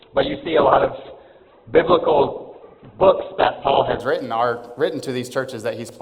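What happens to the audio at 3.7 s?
An adaptive stream starting at a low bitrate is still in effect at 3.7 s, in the last moments of the low-quality stretch that runs from 0.0 to 4.0 s. The player began on a cheap version of the stream to start quickly, and nothing above about 4.2 kHz is present, which fits a very low Opus rate near 8 kbit/s. At 4.0 s the treble returns abruptly, with no gap, consistent with a step up to roughly 64 kbit/s.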